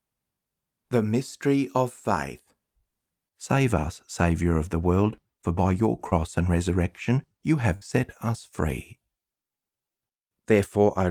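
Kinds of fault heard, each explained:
Short concealed packet loss: A brief stretch of the call arrived too late to be decoded. The receiver covered the hole by extending the sound just before it, then blended back into the real audio. It happens once, at about 6.09 to 6.14 s, right after "world for by your" and before "and resurrection you". About 20 ms of audio is missing. It is heard as a quick smear rather than a clean gap.
Burst of packet loss: Several packets in a row were lost, leaving a longer hole. The receiver kept playing the last sound and let it fade as the gap went on. Then the audio resumed further along, with the middle part gone. This occurs once, from about 7.76 to 7.83 s, between "and resurrection you" and "set us free". Roughly 60 ms is missing. The join sounds stretched and skipped.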